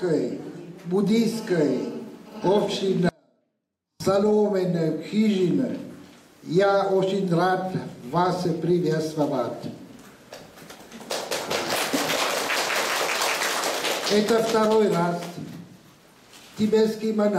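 From 3.09 s to 4.00 s the sound abruptly drops away for about 0.91 s, leaving only a faint trace some 40 dB below normal before snapping back. This audio dropout to a faint residue likely comes from the signal being lost while the path stayed live.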